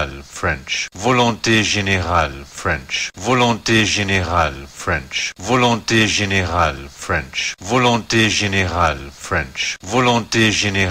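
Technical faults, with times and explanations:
No technical faults are audible.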